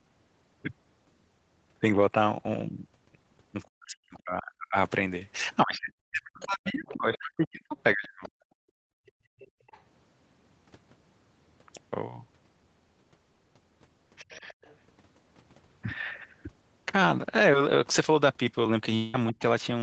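From 3.7 to 8.32 s the speech is pulled down, by about 40 dB at its deepest and for around three seconds in total, breaking into dips and missing fragments. This is speech suppressed in double talk, likely because the echo canceller turned down both the talker and the loudspeaker echo while both sides were talking.

Between 6.42 and 9.8 s, a second voice sits roughly 20 dB below the main speech. This is the other side's voice leaking through, likely from loudspeaker sound the echo canceller left in the microphone signal.

From 8.6 to 9.67 s the room sound drops out for about a second, falling by about 30 dB at most. This is background gated by the echo canceller, which clamped the microphone while the loudspeaker played and then released it.

At 14.23 to 14.43 s a brief suppression of about 25 dB recurs, and from 14.31 to 14.75 s faint leakage follows at roughly 30 dB below the speech.

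At 18.66 s a click or brief buzz marks a repeated buffer. A 1.33 ms piece plays twice with a hard join, which fits a 64-sample buffer.

From 18.96 to 19.16 s a long network dropout, likely a run of lost packets, leaves 180 ms missing. A fading 181 ms fill of buzz or hiss covers the gap before the audio resumes without that stretch.

Just after, at 19.33 to 19.40 s, a final short double-talk dip of about 25 dB clips the speech.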